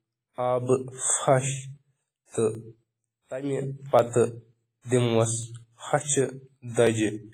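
From the first moment, the speech carries the artefacts of heavy compression, though the file itself is a high-bitrate MP3. This is low-bitrate audio saved at a high bitrate: the material was likely squeezed through a low-rate codec first, something in the region of a 24 kbit/s WMA stage, and the later generous MP3 encode cannot restore what was discarded. On a spectrogram, energy stops at a hard shelf near 15.5 kHz, with blotchy, quantised patches below it.

Starting at 1.11 s and recurring every 1.44 s through 6.87 s, about five short clicks interrupt the speech at a steady, metronomic spacing. These are clock drift buffer slips. Two devices were likely running on independent clocks that disagreed by around 500 parts per million, so the buffer between them slowly drifted until a few tens of samples were dropped or repeated. In the waveform each appears as an abrupt discontinuity, and on a spectrogram as a thin vertical broadband stripe.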